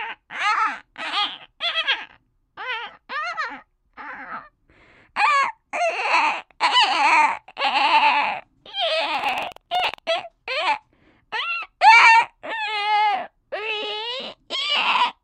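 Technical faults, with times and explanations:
9.10–9.99 s, buffer tearing: a rattling 21.5 Hz buzz, as writer and hardware read cross inside each buffer, splicing in a sliver of audio about a tenth of a second old, fitting a 2048-sample buffer.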